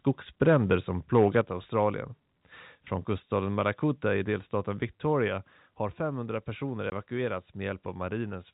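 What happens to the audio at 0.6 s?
At 0.6 s the microphone input gain was likely set about 3 dB too high, causing microphone overload from 0.41 to 0.75 s: a small share of peaks hit the converter's ceiling and flatten, adding a harsh crackle to the loudest moments.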